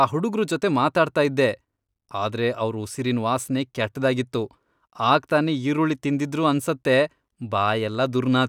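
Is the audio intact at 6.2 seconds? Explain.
Yes, the audio is intact at 6.2 seconds, with no fault to be heard at that moment.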